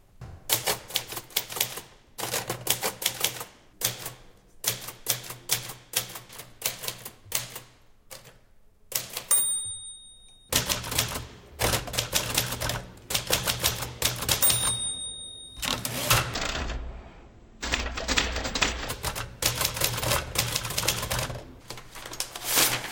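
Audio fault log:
16.34 to 18.89 s, stereo read as mono: the sound drops to half speed and an octave low, since left and right samples get played back to back as one channel.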